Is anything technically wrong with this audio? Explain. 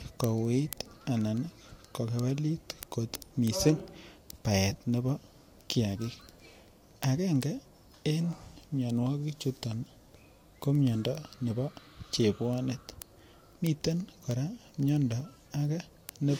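Yes. From 0.24 s to 16.25 s, sharp ticks sound at a steady rate of about one every 0.15 s, roughly a hundred in all. These are word clock ticks. The receiving device's unlocked clock drifts roughly 150 ppm from the sender's, so each slip drops or repeats one sample.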